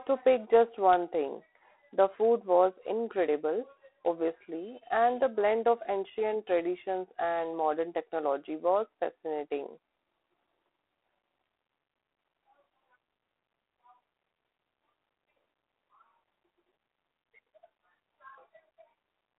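From start to finish the speech runs through G.726 ADPCM, and the damage is plain to hear. There's a harsh, rasping hiss riding along that swells and fades with the level of the speech, which fits the 24 kbit/s rate, where each sample carries only a few bits of prediction error. The band is narrow too, roughly 300 Hz to 3.4 kHz, with nothing at all above 3.9 kHz.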